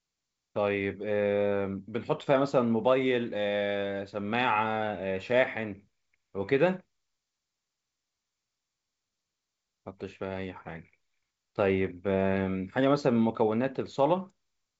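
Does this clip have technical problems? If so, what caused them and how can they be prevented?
No, there are no technical problems to report here.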